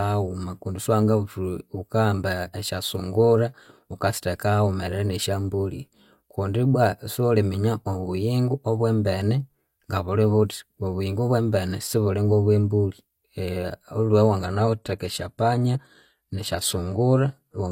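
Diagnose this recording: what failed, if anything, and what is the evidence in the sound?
The failure is at the network and codec stage: the adaptive stream dropped to a lower bitrate. At 14.39 s the speech abruptly loses quality, with no gap, and stays degraded to the end of the clip. Nothing is heard above 15 kHz, and the upper band takes on a synthetic sheen with more audible coding artefacts. The player switched renditions when throughput fell, and the character of the sound points to a shift from roughly 96 kbit/s AAC-LC to about 24 kbit/s HE-AAC with its reconstructed treble.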